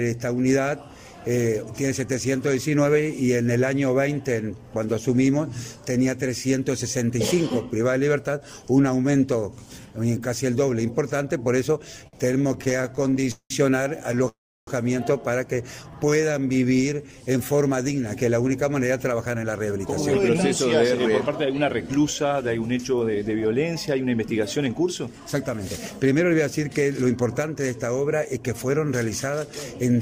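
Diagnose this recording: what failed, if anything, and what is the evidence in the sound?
Network delivery and the receiver's jitter buffer are at fault in the repeated stalls (stutter) from 12.00 to 13.52 s. Packets arrived late or too slowly, so the buffer kept running dry and the receiver stretched the last sound to fill each wait. There are 27 such gaps, totalling 487 ms and about a third of that span, the longest 188 ms. A shorter burst of 4 tiny gaps (41 ms, none over 16 ms) follows at 14.12 to 14.28 s. Nothing is lost, but the audio drags and stammers.

A call audio freeze follows directly at 14.28 to 14.69 s, likely from packets held up in the network long enough to empty the jitter buffer completely. The receiver carries the last sound on for 389 ms, and 320 ms of that decays into silence before the audio resumes from where it stopped. No audio is skipped. The pause is inserted instead, and the playback delay grows by 389 ms.

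The jitter buffer slow-down from 15.84 to 17.64 s comes from the receiver rebuilding its reserve. It repeats single pitch periods and bits of pause over and over, adding 265 ms, so the audio plays at about 86% of normal speed while keeping its pitch. Sounds are audibly drawn out through that stretch, like a tape running slow without the pitch dropping.

The jitter buffer speed-up from 19.11 to 25.61 s cuts back the delay. The buffer was fuller than its target, so the receiver trimmed short pieces of a pitch period or so, many times in a row. About 0.7 s is cut in total, and playback runs at roughly 109% speed at unchanged pitch. The sound comes across as hurried over those six and a half seconds.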